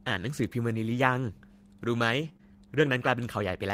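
At 0.93 to 0.95 s, one lost packet rebuilt from error correction. The packet after it carried a low-bitrate copy, and the decoder played that. There is no gap. The 20 ms patch just sounds rough and grainy. At 2.21 to 2.27 s it happens again. The 40 ms rebuilt stretch points to two packets. It has the same coarse, noisy texture.

Straight after, short concealed packet loss begins. From 2.29 to 2.43 s, audio arrived too late. The receiver extended the last sound and then blended back. This first gap also adds roughly 15 ms of extra time. Within it, further losses hit 2.33 to 2.37 s and 2.37 to 2.41 s, each about 20 ms filled. The speech smears and wobbles there, and a brief consonant may drop out.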